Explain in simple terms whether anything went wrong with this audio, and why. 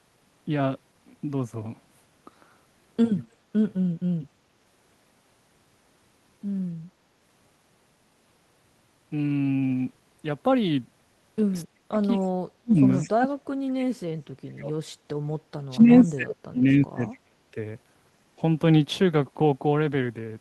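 Between 11.63 and 17.36 s the speech keeps sinking to near silence or dropping out in pieces, at 11.63–11.98, 12.37–12.8, 13.01–14.76, 15.01–15.19 and 15.57–17.36 s. This is speech suppressed in double talk: both sides were likely talking at once, and the echo canceller turned the talker down along with the echo.

At 12.19–12.28 s a brief, faint repeat of the voice can be heard, arriving about a quarter of a second late. This is an echo leak, likely from a loudspeaker on the other end whose echo canceller let some of the sound slip back.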